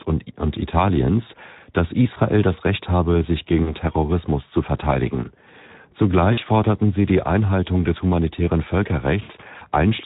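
Throughout the clip the speech sounds hoarse and grainy, with a noisy edge on voiced sounds. This is Speex codec damage. The codec has too few bits to rebuild the excitation, so it approximates it with noise. The level of damage fits a low setting around 11 kbps.

From 3.63 to 3.73 s, right after "habe sich", the voice smears into a short stretched sound that fades before normal speech returns. This is VoIP packet loss concealed by the speech codec. With no data for about 40 ms, which points to two lost frames, the decoder extended the last pitch and filter at falling gain. The voice stays weak as it recovers.

The same happens from 6.33 to 6.39 s, just before "forderten sie die", with another concealed gap of about 40 ms.

From 9.21 to 9.32 s, after "des humanitären", the smear lasts longer and fades further. About 80 ms was lost here before the speech resumes.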